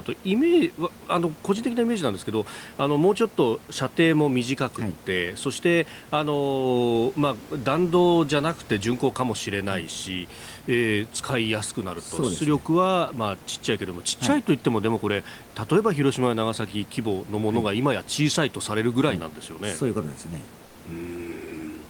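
Comfort noise in place of the background appears from 20.65 to 20.75 s, a 100 ms stretch where the room's real background is swapped for a smooth, featureless hiss about 3 dB quieter. The room noise, sitting about 24 dB below the speech, loses its texture and sinks slightly, then returns when sound resumes. The likely cause is Opus discontinuous transmission: the sender paused during silence, and the receiver filled the gap with synthetic noise.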